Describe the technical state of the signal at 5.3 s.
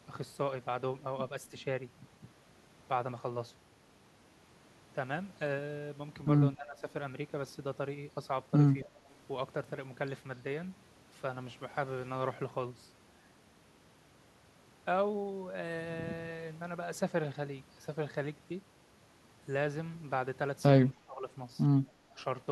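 At 5.3 s the speech signal is intact, with no audible dropout, distortion, noise burst or other fault at that point.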